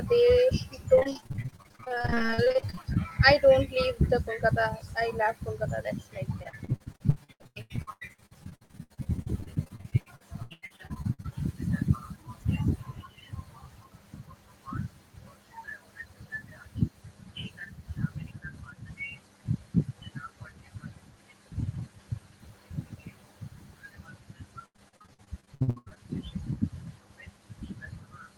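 From 0.95 to 2.97 s, 6.43 to 11.26 s and 24.66 to 25.98 s, repeated packet loss gives choppy, robotic speech. About 40 to 47 percent of each stretch is guessed fill, unlike a single dropout.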